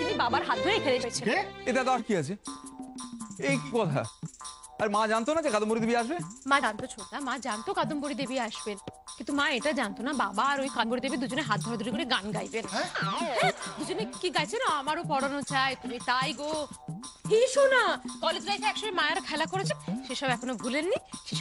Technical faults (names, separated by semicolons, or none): compressed frames skipped